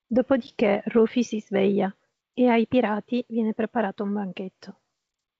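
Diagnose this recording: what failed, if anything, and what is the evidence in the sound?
The failure is at the network stage: packet loss on an ADPCM call. At 0.47 s the speech breaks into a hard-edged silent gap of about 10 ms, consistent with a single lost packet. The decoder's predictor and step size then lose track of the G.722 stream, and the audio comes back misjudged until about 0.50 s.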